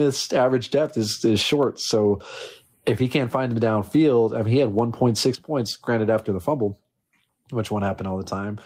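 A speech clip with gain pumping throughout, the gain swinging by around 20 dB, likely from excessive input gain hitting a fast limiter. At 5.35 s a sudden gain jump drops everything by about 14 dB until the end, likely an unramped digital gain change, seen as a sharp step in waveform height.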